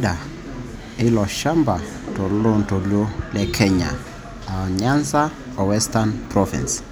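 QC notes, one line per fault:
No faults found on this pass over the speech.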